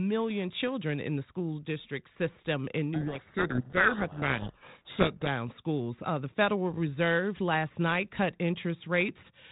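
From 2.94 s to 5.28 s there's a codec payload misread: the two ends disagree on the bit order of the G.726 code words, so the decoder unpacks every sample wrong and the speech gets buried in harsh, grinding distortion. The 32 kbit/s G.726 path itself leaves only light, band-limited telephone colouring.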